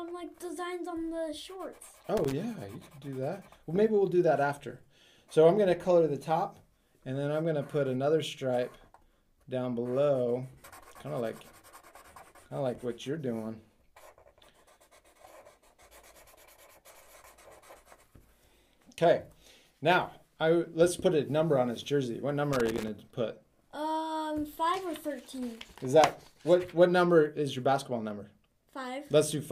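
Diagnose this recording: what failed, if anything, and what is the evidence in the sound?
A loose connector in the analogue wiring intermittently breaks contact, chopping the signal into irregular crackle from 2.17 to 2.32 s and 22.53 to 22.88 s.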